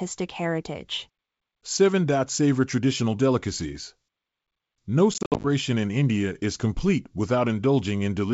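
Speech that breaks into hard-edged silent holes between 5.14 and 5.47 s, with about 170 ms lost across 300 ms and the longest gap 60 ms. Sound resumes slightly distorted: packet loss on an ADPCM call, which throws the decoder's predictor and step size out of step.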